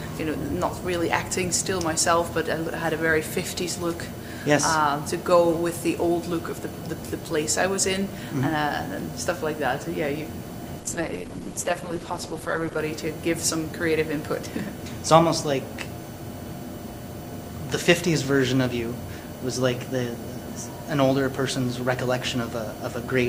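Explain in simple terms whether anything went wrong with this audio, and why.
Adaptive stream at a lower bitrate, from 10.8 to 12.8 s: the stream briefly switched to a lower-quality copy, so the sound abruptly turns duller and grainier, with no gap.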